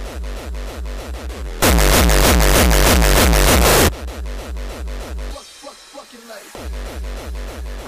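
From 1.62 s to 3.89 s the sound turns into loud, harsh distortion, and quiet moments become as loud as everything else. The likely cause is signed and unsigned samples mixed up, with the top bit flipped so every zero crossing leaps across the full range. This fits 8-bit samples.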